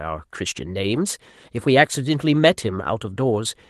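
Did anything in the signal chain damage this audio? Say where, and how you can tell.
Yes, at the network stage: two lost packets rebuilt from error correction, at 0.95 to 0.97 s and 2.35 to 2.37 s. Each spans a single 20 ms frame that sounds briefly rougher and noisier than the surrounding speech, but with no dropout. A packet went missing each time, and the Opus decoder filled the slot from the low-bitrate copy carried in the following packet, so the frame is present but coarsely coded within the call path's 12 kHz bandwidth.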